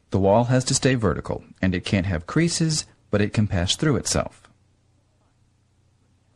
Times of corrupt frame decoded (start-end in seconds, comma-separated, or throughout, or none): 0.91, 2.07